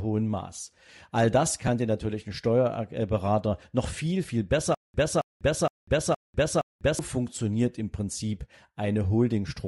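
Across the whole speech clip there is a breathy, grainy edge and thinned upper spectrum, with noise-filled highs. This is most likely Bluetooth LC3 compression, consistent with 7.5 ms frames at a bitrate around 48 kbps. The damage is plainly audible, unlike a simple low-pass, which would dull the sound without the added grain.

At 1.67 s, just before "dir natürlich ein", one lost LE Audio frame leaves a 7.5 ms gap. The decoder patches it by reusing the previous spectrum with scrambled signs, so it sounds like a brief noisy smudge rather than a hard click or a dropout to silence.

From 4.75 to 6.99 s, between "noch viel viel" and "funktioniert im", there is a stutter with silent gaps. The same 270 ms fragment plays five times, each followed by about 196 ms of digital silence, repeating every 467 ms. The likely cause is a stalled player retrying its last buffer, and the audio meant for that stretch is lost. 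Unlike frame concealment, the repeats are exact copies with true silence between them.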